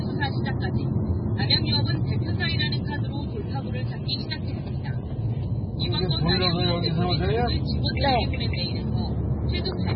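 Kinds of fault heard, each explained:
MP3 compression: The sound has nothing above 5.6 kHz, so the top end is sharply cut off. Heavy codec damage runs through the whole clip. This is likely an MP3 encode starved of bits, which fits a very low bitrate near 16 kbps. The encoder dropped the treble at a fixed point. It also zeroed weak frequency lines, which flicker on and off between frames. The result is a watery, swirling texture with smeared attacks.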